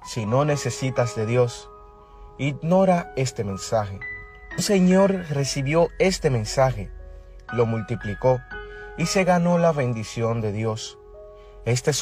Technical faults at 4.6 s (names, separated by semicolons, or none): compressed frames skipped